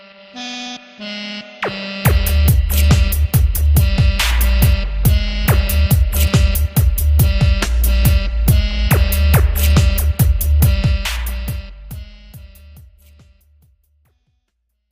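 The signal shows no technical faults, and its level eases down in a smooth fade-out from roughly 10.5 s to silence at 14.9 s, with no click or hard edge at the end.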